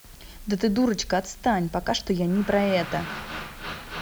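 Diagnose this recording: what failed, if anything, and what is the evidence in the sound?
What failed is the sample-format conversion: the speech has been squeezed down to low bit depth with dither, and the evidence runs through the whole clip as a steady, even hiss sitting only about 25 dB under the voice. It doesn't pump or crackle with the signal, and there's no grainy distortion on quiet tails. That's the signature of 7-bit rounding with dither added first, which turns the quantisation error into constant white noise instead of distortion.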